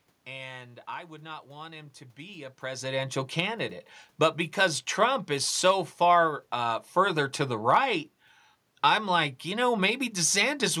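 No technical faults can be heard in this speech recording. There is background noise from the room, and around 2.5 seconds the voice changes level as the talker shifts position relative to the microphone.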